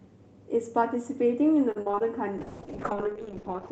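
From 1.71 to 2.02 s, repeated packet loss hits the stream: six separate gaps, the longest 43 ms, each patched by stretching the previous audio, so nearly half that stretch is concealment. The speech turns choppy and robotic, with fragments missing.

From 2.39 s to the end, a call bitrate drop pushes the Opus encoder from 32 kbps down to 7 kbps, holding there for 1.31 s. The coarser coding roughens the speech and thins its top end, leaving a watery, muffled quality.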